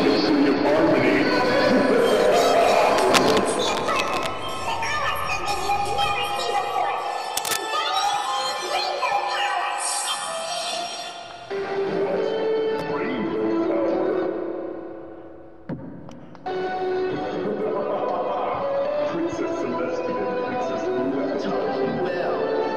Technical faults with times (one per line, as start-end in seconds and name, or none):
2.97-4.28 cable scratch noise
7.37-7.57 cable scratch noise